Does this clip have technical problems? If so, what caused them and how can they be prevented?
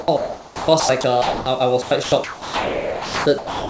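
Yes. Sound chopped by the voice detector appears from 0.00 to 1.46 s and again from 1.82 to 3.70 s. About 0.95 s and 1.52 s of the speech are replaced by comfort noise, so quiet syllables and word edges drop out and the speech sounds choppy. This is likely from a sender-side voice detector gating too aggressively. Lowering the detector's threshold, adding hangover time, or disabling discontinuous transmission prevents this.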